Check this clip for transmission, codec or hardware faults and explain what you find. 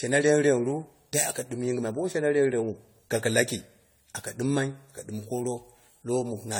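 Generation loss runs through the whole speech clip: swirly, smeared, hollow tone with softened consonant attacks. The likely cause is repeated lossy re-encoding, around seven passes, each quantising on a shifted frame grid so noise and spectral holes pile up. That damage exceeds what one encode at the 64 kbit/s AAC rate it suggests would leave.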